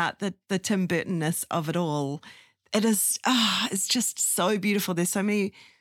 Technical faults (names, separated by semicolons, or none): none